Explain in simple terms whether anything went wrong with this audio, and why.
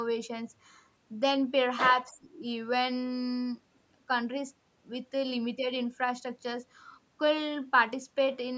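Something went wrong from 2.09 to 2.41 s: the call's echo canceller most likely could not tell the talker apart from sound coming back from the far end and turned both down. This is speech suppressed in double talk. For about a third of a second, the speech dips sharply.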